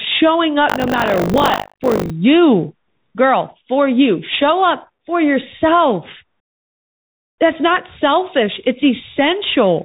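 A speech clip carried over a Bluetooth CVSD headset codec for its whole length, with buffer tearing in the opening seconds. The link squeezes the signal into one up-or-down bit per sample with an adapting step, which fits the 64 kbps CVSD headset path. Nothing above about 4 kHz survives, so the speech sounds narrow and telephone-like. Sibilants come through scratchy, loud high-frequency sounds distort where the step size can't keep pace, and a granular hiss sits under the speech throughout. From 0.68 to 2.1 s, the software writing the playback ring buffer and the hardware reading it drift out of step and cross inside each period. Roughly a fifth of every buffer is replaced by audio from about 70 ms earlier, with hard joins on both sides. The result is a robotic 50 Hz buzz while sound is present, a repeat rate that points to a 20 ms buffer period.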